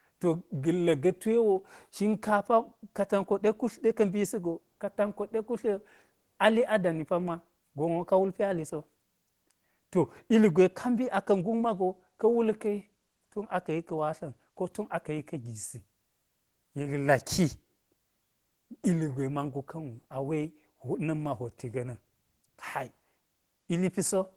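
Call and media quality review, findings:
Nothing stood out on listening to this speech recording.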